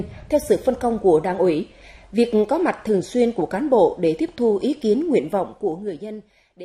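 At 5.21 s the level starts to fall, and it falls in steps rather than smoothly. This is zipper noise. Each step is 1 dB, applied with no smoothing between them. The steps come about ten times a second. Every jump cuts the waveform abruptly and leaves a small click. Together they form a ticking, zipping texture on top of the sound. It lasts until 6.57 s, by which point the level has dropped by around 20 dB.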